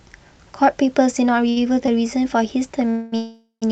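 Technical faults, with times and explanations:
1.49 to 1.58 s, short stall from a late packet: the sound hangs for about 68 ms with a faint buzz or dip, then continues from the same point with nothing lost. A packet came late, the jitter buffer ran dry, and the receiver stretched the last sound until it arrived.
2.90 to 3.14 s and 3.16 to 3.64 s, call audio freeze: the sound stops moving forward and turns into a fading buzz or hiss for 224 ms, then for 456 ms, with the second falling to silence for about 130 ms before the audio resumes where it stopped. The likely cause is packets held up in transit, which emptied the jitter buffer. The receiver extended the last sound while it waited, so nothing is missing, but gaps have been inserted.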